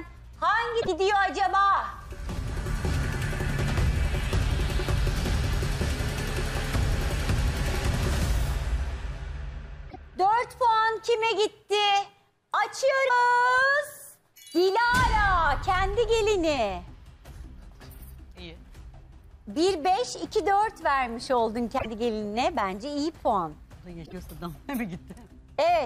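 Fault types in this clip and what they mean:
Broken MP3 bit reservoir: at 0.80, 9.89, 13.08, 21.77 and 24.05 s, 30 to 80 ms chirps, noise bursts or short holes, likely frames decoding against missing borrowed data after cuts.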